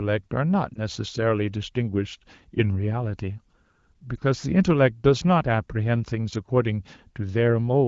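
At 0.73 s and again at 4.16 s the speech briefly dips and warbles, each time for a few tens of milliseconds. These are lost AMR speech frames: single 20 ms frames failed their checksum, so the AMR-WB decoder, whose light coding texture fits a higher-rate mode, filled each gap by repeating the previous frame's pitch and vocal tract settings at reduced gain. The voice then resumes weak for a moment.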